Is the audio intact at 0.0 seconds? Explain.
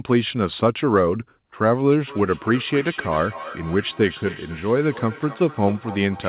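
Yes, the speech is intact at 0.0 seconds: no fault occurs there, only the ordinary narrowband character of the call path, with nothing above 4 kHz.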